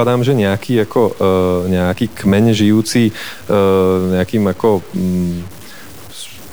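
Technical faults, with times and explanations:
Throughout, low bit depth without dither: speech turns grainy, quiet passages sputter; likely truncated to 6 bits, error tracking the signal, noise roughly 25 dB below it.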